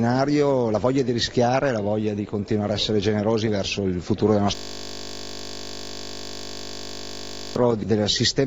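From 4.55 s to 7.56 s, a system hang loop occurs. The computer or its audio driver stopped supplying new samples, but the sound hardware kept playing the same stretch of its ring buffer. A 20 ms slice repeats exactly for about three seconds, which fits a 20 ms buffer. Because each repeat is so short, the result is a steady, mechanical buzz at 50 Hz rather than a stutter, until normal audio resumes at 7.56 s.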